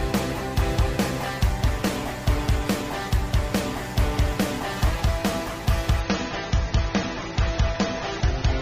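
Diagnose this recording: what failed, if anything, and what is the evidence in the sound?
The network stage faltered: a slowed connection pushed the adaptive stream to a lower bitrate at 6.00 s, holding to the clip's end at 8.62 s. Without any gap, treble vanishes above 7 kHz and codec artefacts rise, suggesting a fall from 96 to 24 kbit/s AAC.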